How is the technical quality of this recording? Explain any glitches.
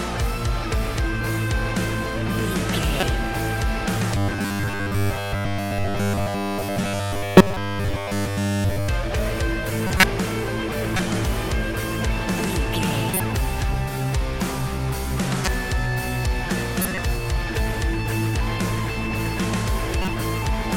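The quality is poor, with two recurring faults.

Robotic sound from repeated short buffers, 4.15 to 8.88 s: a rigid, metallic buzz at 100 Hz, likely from the last 10 ms being replayed over and over while most of the real audio is skipped.

Corrupt frame decoded at 2.99, 7.37, 9.87, 10.96, 13.07, 15.44, 16.82 and 20.02 s: damaged compressed frames were played anyway, so energy lands at the wrong frequencies. Each one is heard as a chirp or noise burst lasting from about 30 to 200 ms. The early ones are the strongest and the last two are about 10 dB lower.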